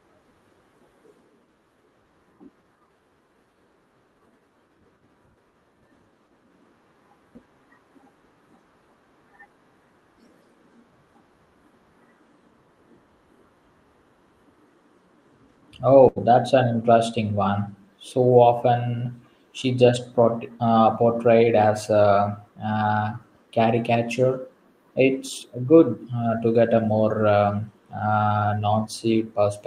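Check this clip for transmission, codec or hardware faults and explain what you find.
One transmission fault is audible in this speech, carried over an Opus call path whose top end stops near 12 kHz. It is a burst of packet loss from 16.08 to 16.18 s, just before "that's an interesting one". The preceding sound is carried on and faded for about 76 ms, then the speech jumps forward with about 80 ms missing. Several consecutive packets arrived too late or not at all, so the receiver stretched and faded the last audio to bridge the gap.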